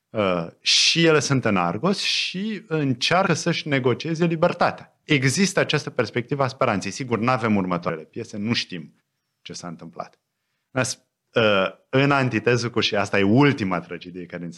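At 3.26 s, 5.03 s and 7.88 s, compressed frames are skipped. The speech jumps ahead by about 70 ms, then 200 ms, then 70 ms. That fits losing roughly three, ten and three 26.1 ms frames. Each join is a short smeared blip.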